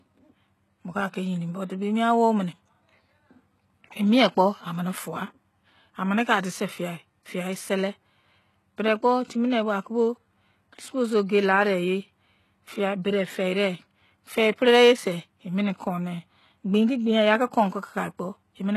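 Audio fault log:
Throughout, HE-AAC compression: the speech has plainly audible codec damage, with s sounds coming out gritty and lispy and the treble sounding synthetic, which points to a likely low-bitrate HE-AAC encode, roughly 16 kbps. The upper band is patched up from copied lower bands rather than coded, so its harmonics do not line up. A spectrogram shows repeated blocky texture above the crossover and nothing at all above 12.3 kHz.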